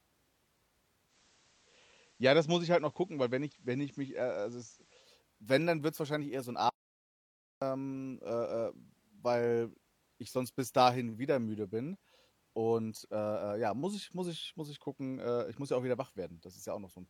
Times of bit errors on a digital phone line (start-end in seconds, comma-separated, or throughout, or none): none